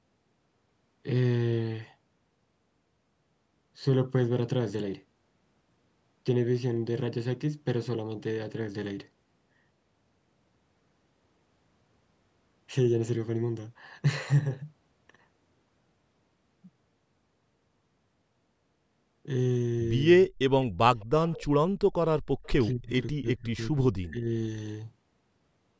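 At 20.28 to 20.33 s the speech drops sharply, by roughly 30 dB, for a brief instant. This is likely speech suppressed in double talk: with both ends talking, the echo canceller could not tell the local talker from loudspeaker echo and turned everything down. Because the talker's own speech is lost, not just the room behind it, it differs from gating of the background.

Background gated by the echo canceller follows at 20.74 to 20.85 s. The room sound beneath the speech falls by about 40 dB for around a tenth of a second, then comes back. The canceller clamped the microphone while the loudspeaker played. Only the ambience vanishes, in a short hard hole, which separates it from suppression of active speech.

Faint delayed copies of the speech then appear at 20.99 to 21.06 s, 21.28 to 21.45 s and 22.43 to 22.48 s, each trailing the original by 208 ms. The first and last sit far below the speech, and the middle one is somewhat louder. 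This is likely echo leak: the far end's canceller let part of its loudspeaker pickup through. A repeated trace, not a loss, marks it apart from suppression.

Suppression in double talk returns at 22.73 to 22.93 s and over 23.14 to 24.29 s. The later span is turned down for well over half a second, dipping deepest at roughly 35 dB. The speech itself breaks up while the other side talks.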